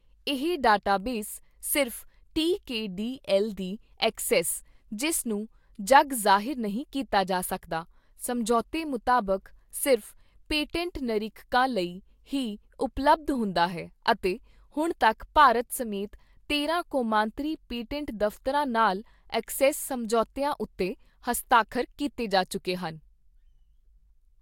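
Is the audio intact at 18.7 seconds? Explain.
Yes, the speech at 18.7 seconds is intact, with no dropout, click, distortion or other fault at that moment.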